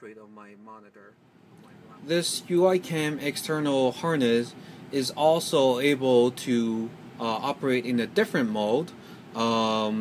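There are no technical faults to describe at any point in the audio.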